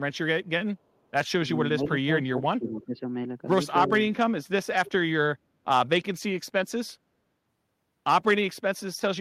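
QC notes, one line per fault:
1.73–3.02 s, speech suppressed in double talk. The talker's level dips and parts of the speech thin out or drop away, with the deepest cut around 15 dB. About a second of this stretch is affected in total. The likely cause is an echo canceller hearing both sides at once. Unable to tell the near talker from the loudspeaker echo, it turns everything down together. The speech sounds ducked and patchy rather than simply quiet.
2.68–2.85 s, echo leak. A short, faint copy of the speech returns about 316 ms after the original. It sits roughly 25 dB below the speech, so it is a brief ghostly scrap rather than a clear repeat. This likely comes from a loudspeaker on one side of the call whose echo canceller let some of its microphone pickup through. That residue was then sent back down the line. It overlaps the suppressed stretch above.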